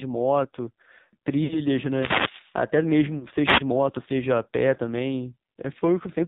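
The whole clip goes through the AMR narrowband mobile codec. Nothing above 4 kHz gets through, and the speech sounds heavily buzzy and synthetic, which fits a low mode around 5.9 kbps.

From 1.44 to 1.60 s there are lost AMR speech frames. The decoder stretches the last good pitch and fades it out, and that roughly 60 ms gap fits three dropped 20 ms frames.

From 1.73 to 2.60 s comes a wireless microphone noise hit, a swish of static as the FM radio link fades.

At 3.18 to 3.25 s there's a shorter drawn-out dip that fits two lost frames.

Then another brief static burst runs from 3.45 to 3.62 s.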